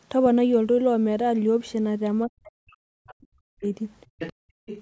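Speech suppressed in double talk, from 2.26 to 3.64 s: the talker's voice sinks by roughly 40 dB at its deepest, likely because the echo canceller mistook overlapping talk for echo. Other side's voice leaking through appears at 3.07 to 3.13 s as a faint scrap far below the talker, likely residual loudspeaker echo the canceller missed. Background gated by the echo canceller, 4.06 to 4.66 s: the room sound drops by about 40 dB while the canceller clamps the microphone, then returns. The leaking voice comes back louder at 4.19 to 4.33 s, around 10 dB under the speech, and again from 4.66 s to the end, somewhat quieter.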